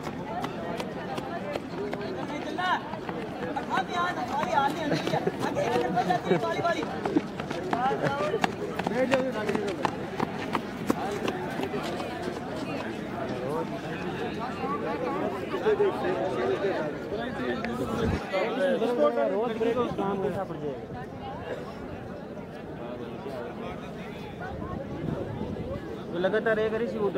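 No technical faults are audible.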